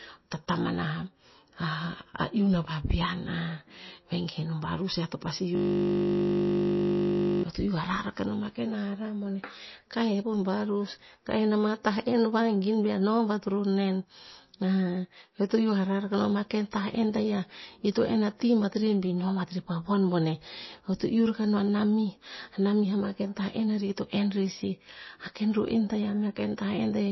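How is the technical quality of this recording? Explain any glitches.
The recording has two problems: codec damage that runs through the whole clip and a freeze-and-repeat glitch early on.

Throughout, the speech has a watery, swirling quality and nothing above about 5.8 kHz. This is likely MP3 compression at a low bitrate, in the region of 24 kbps. With so few bits available, the encoder discards weaker frequency lines, which flicker on and off between frames, and it removes the top of the spectrum entirely. The result is plainly audible smearing and a dull top end.

From 5.55 s to 7.43 s, there is a system hang loop. The playback system stopped supplying new audio while the hardware kept replaying the same ring buffer. A 20 ms segment repeats exactly, 94 times in a row, which points to a short buffer. At that length, the repeats merge into a steady buzz at 50 Hz rather than a stutter, and the buzz replaces the speech for nearly two seconds.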